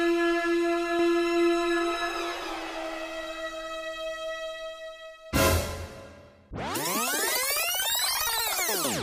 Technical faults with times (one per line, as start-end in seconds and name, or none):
0.99-5.55 doubled audio track